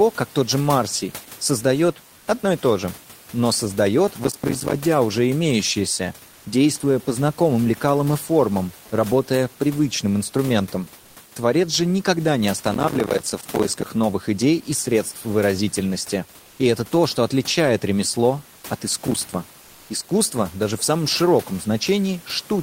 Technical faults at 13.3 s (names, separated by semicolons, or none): processor overload crackle